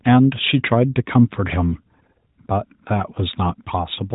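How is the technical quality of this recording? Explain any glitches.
No glitches or faults here.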